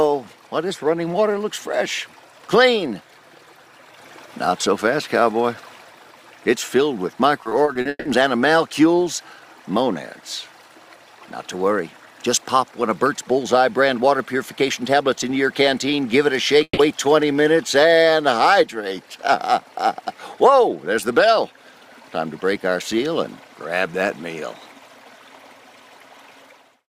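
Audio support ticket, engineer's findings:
Repeated packet loss (robotic sound), 7.43–8.07 s: six gaps in the network path, longest 160 ms, each patched by extending the prior sound. About 280 ms missing, 44% of span concealed. Choppy, robotic texture with pieces dropped.

Burst of packet loss, 16.63–16.79 s: consecutive packets lost or late, about 140 ms missing. Receiver held the last sound and faded it, ending in roughly 50 ms of silence. Buzz or hiss tail, then audio resumes further on.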